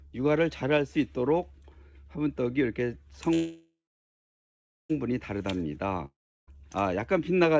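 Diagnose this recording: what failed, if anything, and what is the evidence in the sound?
The network stage failed with a call audio freeze from 3.34 to 4.92 s. The last sound smears into a fading buzz, then about 1.1 s of silence. The audio resumes where it stopped. Nothing is lost, but everything after arrives 1.56 s late. Packets were likely stalled until the jitter buffer ran dry.

A long network dropout runs from 6.06 to 6.49 s. The sound again tails off into a brief fading buzz, then 0.33 s of silence. It returns about 0.42 s further on, with that stretch missing. The likely cause is packets lost in transit on this G.722 call path, whose audio stops at 8 kHz.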